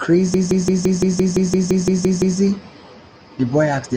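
From 0.34 s to 2.39 s the speech falls into a system hang loop. The driver froze while the hardware kept replaying its ring buffer. A 170.67 ms slice repeats twelve times, 5.86 per second, fitting an 8192-sample buffer. It stutters like a machine gun.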